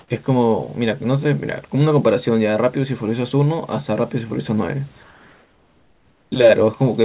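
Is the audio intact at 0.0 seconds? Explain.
No. From 0.0 to 0.08 s, comfort noise likely replaces the background. With no speech detected, the sender paused transmission and the receiver synthesised filler noise. The real background, about 38 dB below the loudest sound, becomes a steady, featureless hiss shifted by about 4 dB.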